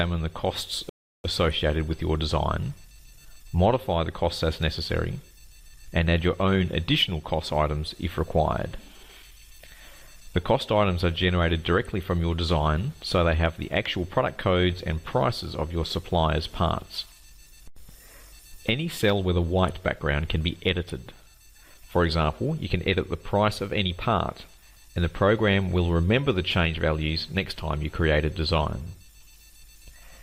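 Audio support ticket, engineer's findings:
Rebuffering stall, 0.89–1.24 s: audio drops to silence, then resumes exactly where it stopped, nothing skipped. Player buffer underrun while awaiting download. Adds about 0.35 s. Waveform: flat silent gap; spectrogram: blank vertical band, content continuous either side.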